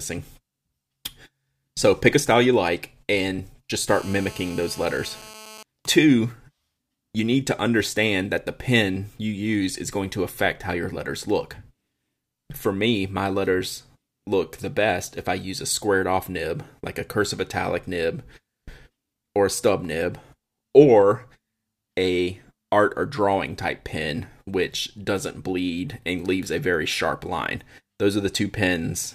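From 3.89 to 5.63 s, GSM phone buzz: rectified 217 Hz handset bursts make a raspy tone about 20 dB down, harsher than mains hum.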